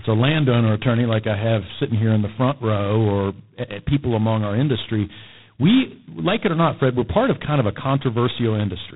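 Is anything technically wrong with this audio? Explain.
Yes. G.726 ADPCM coding damage runs through the whole speech clip, and it is heavy. This codec sends only a few bits per sample describing the difference between the signal and an adaptive prediction of it. The coarseness here points to the 16 kbit/s mode, about 2 bits per sample, so the quantisation error is large and rides on the speech as a harsh, rasping hiss that rises and falls with its level. Nothing above about 3.9 kHz survives, leaving the speech dull and narrowband.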